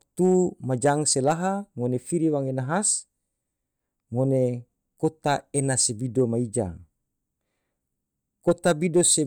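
Nothing in the recording stands out as a technical fault at any point, so there's nothing to flag here.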